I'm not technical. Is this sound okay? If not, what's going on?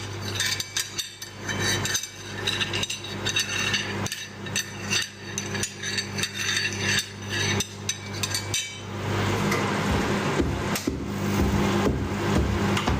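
No. Gain pumping runs through the whole clip, start to finish. The level keeps heaving up and down in a very large swing, and loud and soft parts end up closer in level. The likely cause is that the recording level was set far too high, so an automatic level control keeps yanking the volume down on every loud moment, leaving everything squashed and breathing.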